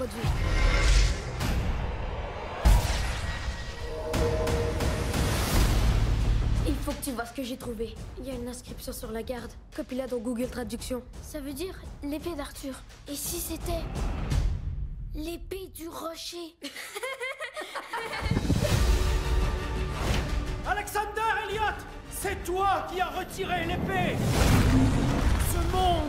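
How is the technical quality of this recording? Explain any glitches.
No technical faults are audible anywhere in the recording, so there are no glitches to account for.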